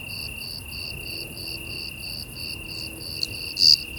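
No technical faults can be heard anywhere in the recording, and the signal holds steady throughout.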